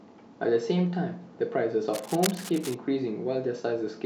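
From 1.93 s to 2.74 s there's a burst of cable scratch noise over the speech, a ragged, rustling scratch sitting roughly 10 dB below it. That's likely a worn cable or connector being moved, its contact resistance jumping around and spraying uneven noise into the signal.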